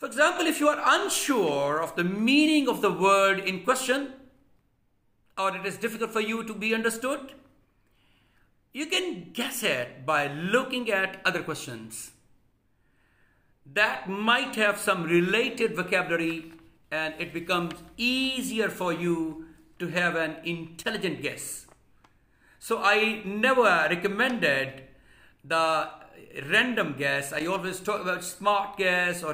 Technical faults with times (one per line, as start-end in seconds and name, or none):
20.83-20.95 loose connector crackle
27.38-27.58 loose connector crackle